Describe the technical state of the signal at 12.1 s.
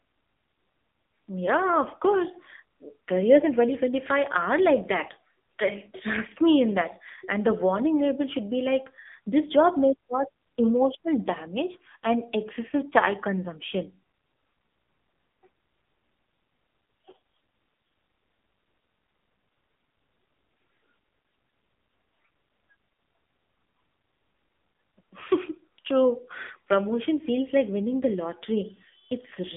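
At 12.1 s the speech carries the AMR narrowband mobile codec damage, which runs through the whole clip. The codec samples at 8 kHz and rebuilds speech from a vocal-tract model excited by sparse pulses, so nothing above 3.7 kHz survives, and the line band sits around 250 Hz to 3.6 kHz. The damage is heavy, with a buzzy, synthetic timbre that fits one of the codec's low modes near 6.7 kbps.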